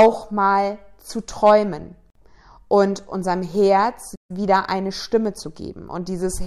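At 2.10 to 2.15 s, right after "mal zu träumen" and before "und unserem", the speech drops into a silence of about 52 ms, its edges smeared, then resumes where it stopped. This is a gap at a join of encoded pieces: separately encoded segments, apparently about 4 s long, were joined without trimming the encoder's leading delay and last-frame padding.

From 4.15 to 4.31 s, the audio halts mid-flow for about 142 ms and then picks up again with "wieder eine". This playback stall likely happened because the player ran short of data or its output thread was briefly blocked, leaving the output silent until it recovered.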